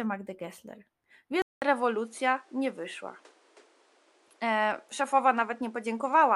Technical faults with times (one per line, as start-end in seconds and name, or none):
1.42-6.35 input switched to a poorer device